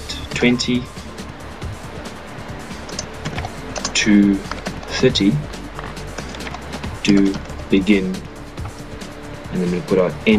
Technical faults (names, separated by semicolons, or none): none